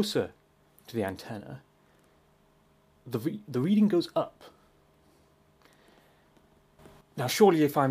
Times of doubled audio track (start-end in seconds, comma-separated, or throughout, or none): none